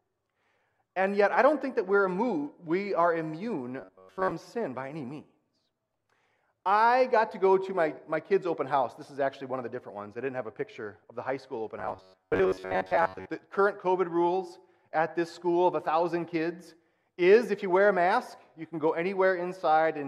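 From 3.81 to 4.31 s and again from 11.80 to 13.29 s, the audio turns into robotic sound from repeated short buffers: a rigid, metallic buzz at a fixed 93.8 Hz, most likely from a stalled stream being filled by looping its last fragment of about 11 ms. Roughly 70% of the material is replaced by these repeats. Unlike a dropout, there is no silence, and the buzz holds steady rather than following the original pitch.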